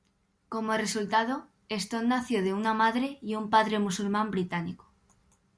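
A speech recording with no technical faults to report.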